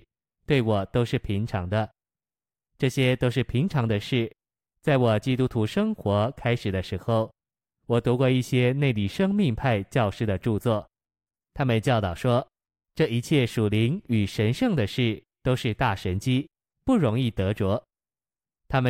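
No audible technical faults.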